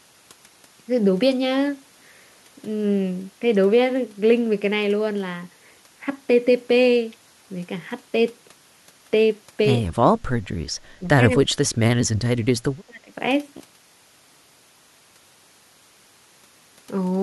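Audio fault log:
9.94–10.22, 10.99–11.08, 11.35–11.78, 11.94–12.11 and 12.86–13.12 s, speech suppressed in double talk: the speech keeps ducking in chunks, from a light dip to nearly gone at about 40 dB down. That's likely the echo canceller clamping down while both sides talk over each other.
13.57–14.65 s, robotic sound from repeated short buffers: the speech turns into a stiff metallic buzz pinned at 66.8 Hz. That fits roughly 15 ms chunks being replayed to fill gaps, with about half the audio repeated rather than new, likely from late-arriving buffers.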